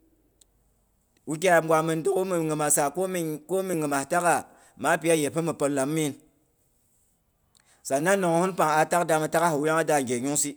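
At 3.74 s and again at 7.72 s the speech skips forward, a tiny sliver, around 15 ms, gone and the edges butted together. That's audio missing between chunks, likely from a recorder handling the signal in 4-second blocks and dropping a bit at each handover.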